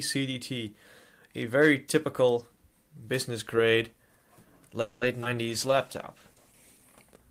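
At 4.81 s the sound stops advancing and the last moment is stretched into a fading buzz or hiss for about 200 ms, until 5.03 s. It never drops to silence, and nothing is skipped: playback resumes exactly where it left off, about 200 ms later than before. This is a call audio freeze, likely caused by packets stalling in transit while the jitter buffer drained, with the receiver continuing the last sound to fill the wait.

Right after, two short concealed packet losses follow back to back, from 5.21 to 5.24 s and from 5.24 to 5.27 s. In each, a stretch of audio never reached the decoder: about 20 ms in the first and 40 ms in the second. Only about 10 ms of synthesized continuation covers each hole, so the sound jumps forward with a brief smear or wobble. The second loss also pulls the playout delay back by roughly 30 ms.

From 5.30 to 5.68 s a jitter buffer slow-down sets in. The receiver rebuilds its reserve by repeating individual pitch periods, adding 41 ms over this span. 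Playback runs at about 91% speed with the pitch unchanged, so sounds come out slightly drawn out.

Overlapping that, at 5.46 s, a call bitrate drop begins. The bandwidth estimate fell, and the encoder went from 32 kbps to 13 kbps, holding the lowest rate for about 1.38 s. Coarser coding with a reduced top end makes the sound rough, watery or muffled until it recovers at 6.92 s.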